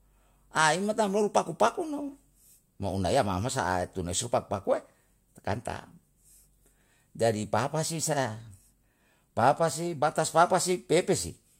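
At 0.62 to 0.64 s, a single loud pop sits on top of the speech, just before "tam loru paku pakumo". It is a sharp click peaking a few decibels above the speech, which continues underneath. A sudden voltage step, likely from a plug, switch or static discharge, entered the signal path.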